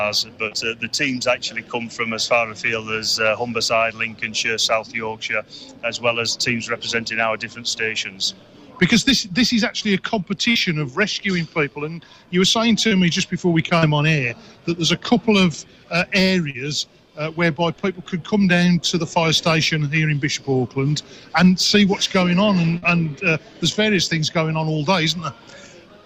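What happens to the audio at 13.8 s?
Between 13.79 and 13.85 s there is a short concealed packet loss. About 40 ms of audio arrived too late, and the receiver filled 34 ms by extending the preceding sound. This is heard as a brief smear. On a spectrogram the pattern runs on unchanged, and the waveform shows a smoothly spliced stretch.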